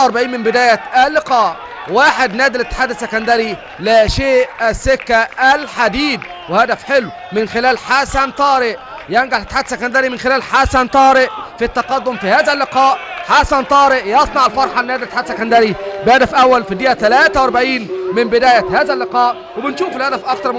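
No technical faults are audible.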